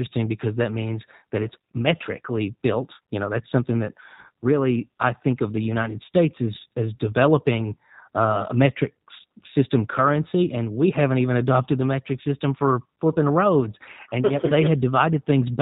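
G.729 codec damage runs throughout the speech: the low-rate encoder models each 10 ms frame from a vocal-tract filter, pitch predictor and sparse pulses, discarding everything above 4 kHz, so the audio sounds band-limited, rough and plainly synthetic, consistent with an 8 kbit/s stream.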